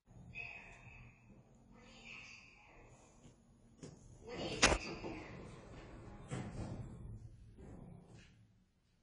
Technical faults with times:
0.00-9.03 AAC compression

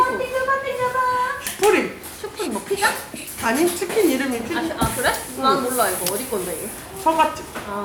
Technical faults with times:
none

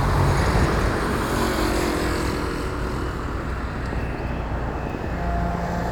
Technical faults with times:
2.33-5.56 train of clicks

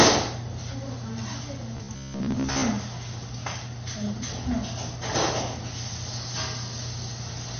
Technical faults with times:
0.00-7.59 MP3 compression
1.77-2.62 robotic sound from repeated short buffers

